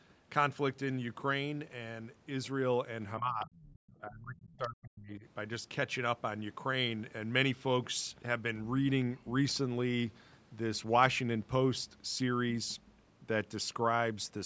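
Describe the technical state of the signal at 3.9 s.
At 3.9 s, speech suppressed in double talk (3.19 to 5.24 s): speech dips in pieces, dropping about 35 dB, likely an echo canceller mistaking it for echo. Waveform dips, darker spectrogram columns.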